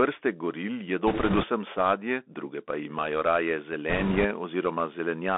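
Across the whole recording the speech is squeezed into a band of roughly 250 Hz to 3.5 kHz, with a grainy hiss beneath it and scratchy, overloaded sibilants. This is the Bluetooth CVSD headset codec, whose one-bit up-or-down coding, consistent with a 64 kbps stream, cannot follow fast loud rises. That granular hiss and slope distortion set it apart from a plain telephone band-limit or a wideband headset codec.

From 1.07 to 1.45 s, ending just before "sadje druge pa imajo", bit errors on a Bluetooth voice link lay a rushing, crackly noise over the speech, at a heavy error rate of something like seven percent. The damage returns from 3.90 to 4.26 s, right after "druge pa imajo raje", slightly lighter at about five percent. Because each flipped CVSD bit shifts the signal only a small step, there are no sharp clicks or silent gaps as with lost packets, just a seething wash of noise.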